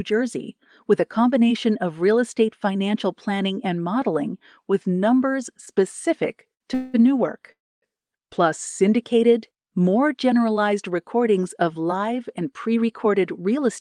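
Short stall from a late packet at 6.54–6.62 s in this speech: the jitter buffer ran dry, so the last sound was held about 66 ms before resuming, with nothing lost. Call audio freeze at 6.74–6.96 s and 7.52–7.84 s, likely from packets held up in transit: the sound stretches into a fading buzz for 194 ms, then 305 ms, with the second dropping to silence for about 270 ms before picking up where it stopped. Jitter buffer speed-up from 12.45 s to the end, right after "generalized recordings of live": the receiver trimmed tiny pitch-period slices, roughly a tenth of a second in total, so the speech runs about 6% fast at unchanged pitch.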